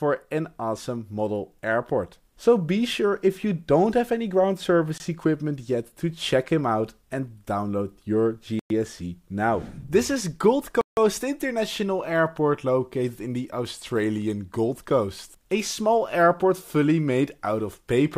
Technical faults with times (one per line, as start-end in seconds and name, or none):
4.98-5.00 block of digital silence
8.59-8.70 block of digital silence
10.81-10.97 block of digital silence